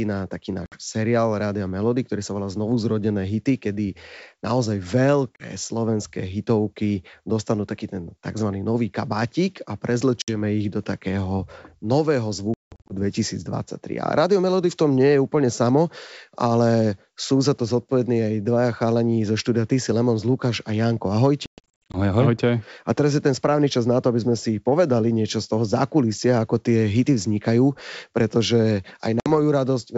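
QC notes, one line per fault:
0.66–0.78 s, packet loss on an ADPCM call: a hard-edged 60 ms silent gap, then slightly distorted speech as the decoder's predictor and step size resync.
5.36–5.49 s, packet loss on an ADPCM call: a 40 ms dropout between "zrodené hity kedy naozaj" and "slovenské hitovky dostanú taký", with a brief distorted restart.
10.22–10.32 s, packet loss on an ADPCM call: a 60 ms hole, about three packets, after which speech returns slightly distorted before settling within tens of milliseconds.
12.54–12.93 s, packet loss on an ADPCM call: after "ich do takého nového", 280 ms lost in bursts over 360 ms, longest 180 ms, each return slightly distorted as adaptation restarts.
21.46–21.97 s, packet loss on an ADPCM call: 340 ms of silence scattered over 480 ms, longest run 120 ms, giving a choppy stretch with repeated distorted returns.
29.20–29.31 s, packet loss on an ADPCM call: a 60 ms gap right after "tie hity vznikajú pretože", with a mistracked step size leaving speech slightly distorted on return.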